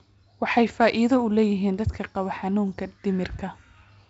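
No technical faults are audible.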